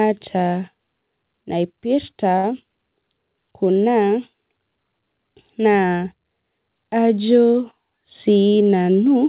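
A speech recording, heard through a narrowband call path with nothing above 4 kHz, consistent with G.711 A-law. From 2.38 to 2.45 s one sound is held too long, with a slight buzz or dip, before speech resumes where it left off. This is a short stall from a late packet: the jitter buffer ran dry, so the receiver stretched the last audio for 53 ms until the packet arrived, losing nothing but adding that much delay. From 7.97 to 8.63 s the speech sounds hurried, running at about 108% speed with unchanged pitch. This is a jitter buffer speed-up: to shed excess buffered delay, the receiver cut short pitch-period pieces repeatedly, removing roughly 70 ms in total.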